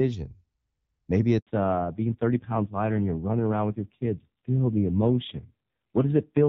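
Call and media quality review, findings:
Handover gap, 1.39 to 1.47 s. Sound cuts out within a few tens of milliseconds and stays silent about 80 ms. Probable component: network handover. No speech frames arrive while the link switches. Content in that window is lost.

Fallback to narrowband, 1.47 s to end. Nothing above 4 kHz from the handover on. Sound turns duller and rougher. Probable component: speech codec after the handover. The wideband AMR-WB stream at 12.65 kbit/s, light damage before 1.39 s, gives way to a narrowband codec. The roughness fits AMR-NB at about 5.9 kbit/s.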